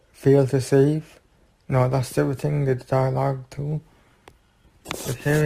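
At 1.70 s the audio abruptly drops in quality and stays degraded to the end. This is an adaptive stream at a lower bitrate. The connection slowed, so a cheaper version played. Codec artefacts rise. There is no gap. This fits Opus falling from 64 to 32 kbit/s.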